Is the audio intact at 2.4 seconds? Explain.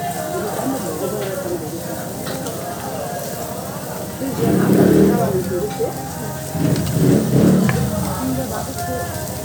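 No. At 2.36 s there is a repeated buffer: fresh audio did not reach the output in time, so the device played the previous block a second time. That block lasts about 1.33 ms, which fits a 64-sample buffer, so the duplicated fragment is far too short to register as a stutter. Instead, the hard joins at either end of the repeat come across as a single brief click in the sound, with a millisecond or two of the real signal displaced.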